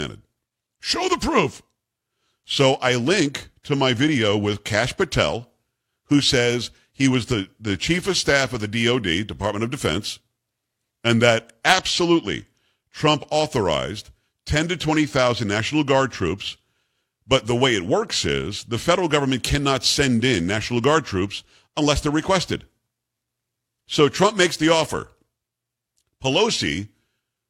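No audible technical fault turns up anywhere across this speech recording.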